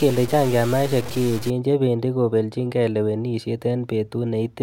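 A speech clip with low bit depth without dither from 0.0 to 1.5 s, ending just before "chebendi kobeljinkei lewenishet". The sound is grainy and harsh there. The distortion rises and falls with the level, and the quietest parts sputter or drop out. The error sits roughly 15 dB below the signal. The likely cause is samples truncated to very few bits, around 5, with no dither, so the rounding error tracks the waveform.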